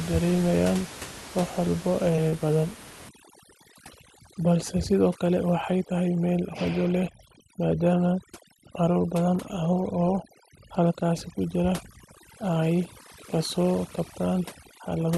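A speech recording carried over a call path whose sound fits Opus at around 32 kbps with audio limited to about 12 kHz. It shows two short concealed packet loss events close together. At 2.15 to 2.19 s, roughly 20 ms of audio failed to reach the decoder in time, and the receiver bridged it with 19 ms of synthesized continuation, extending the preceding pitch or noise shape before crossfading back. At 2.29 to 2.36 s, another 20 ms gap was covered with 26 ms of concealment and about 13 ms of real signal was dropped during the realignment, which produces a brief smear or wobble and can swallow part of a short consonant. From 3.09 s to the end, overdone noise removal is audible. The suppressor, set too aggressively against room noise sitting about 17 dB below the speech, is gating individual frequency bands down to near nothing whenever they approach its noise estimate. The background drops away and breaks up into twinkling musical-noise specks, and the quieter components of the speech are cut along with it.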